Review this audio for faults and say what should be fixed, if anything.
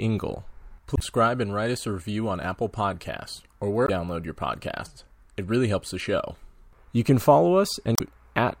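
Damaged data in a compressed stream produces three short glitches in this speech: at 0.96 to 1.02 s just before "and write us a", at 3.85 to 3.90 s just before "your podcasts", and at 7.95 to 8.01 s. Each time the decoder misreads corrupted frames and must resync on the next valid header. On a spectrogram each appears as a brief broadband vertical smear, and the waveform shows an abrupt discontinuity. Verify stream integrity with checksums and retransmission or redownload before decoding.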